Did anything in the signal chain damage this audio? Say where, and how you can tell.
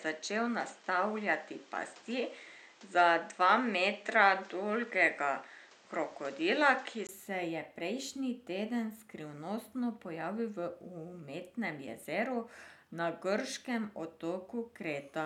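Yes. From the start to 7.09 s, the speech is dull, with nothing above 8.5 kHz. A background noise sits around 30 dB below it. At 7.09 s a 20 ms gap precedes fuller sound, with a level change of about 5 dB. This likely marks an input switched to a poorer device at the driver stage.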